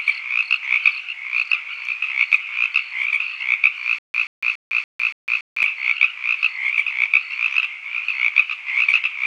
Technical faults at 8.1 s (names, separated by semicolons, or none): none